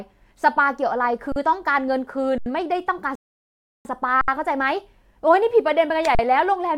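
At 1.32 s, the output buffer of this speech clip runs dry for 40 ms, an underrun with held sample. The converter freezes on its last value, so the waveform flattens and the sound simply stops without a click. Playback then picks up where it left off, with essentially nothing lost, so the return is soft. The same thing happens for 80 ms at 2.38 s.

At 3.15 s the player exhausts its downloaded audio and halts until more arrives, a rebuffering stall. The speech drops to silence for about 0.7 s, until 3.85 s, then resumes at exactly the point where it stopped. No audio is missing; the pause just stretches the clip by that amount.

Two more held-sample underruns follow: a gap of about 69 ms at 4.21 s and one of 40 ms at 6.15 s. Each is a brief flat hold with a gentle resumption.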